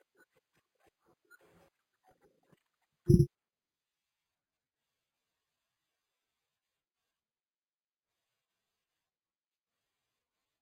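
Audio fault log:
throughout, imaging from sample-and-hold upsampling: A bright metallic fizz rides on the speech and follows its level. Each sample was repeated without smoothing, which fits an original rate near 11 kHz. Mirrored copies start between 5.5 and 11 kHz, about 30 dB below the speech.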